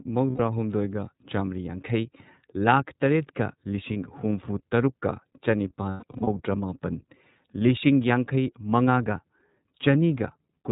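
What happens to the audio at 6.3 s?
Around 6.3 s the audio is just coming out of lost iLBC frames, spanning 5.91 to 6.28 s. The decoder repeats the last pitch cycle with noise, giving a held, buzzy vowel. Losses are scattered, the longest run about a tenth of a second, and the speech snaps back almost at once. The whole clip carries the iLBC codec too. It is narrowband, with nothing above 4 kHz, and it sounds plainly rough and synthetic.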